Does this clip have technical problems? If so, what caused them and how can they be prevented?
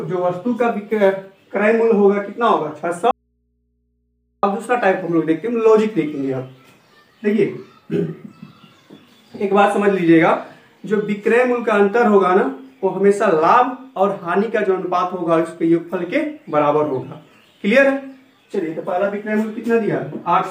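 Yes, there's an audio dropout to a faint residue from 3.11 to 4.43 s. The sound cuts out abruptly for about 1.3 s, and the gap isn't silent. It holds mains hum sitting roughly 50 dB below the normal level. That points to the signal likely being lost upstream, such as a loose cable or a failing connector, while the input stayed open and picked up hum. Securing and checking connections and cables before recording should prevent it.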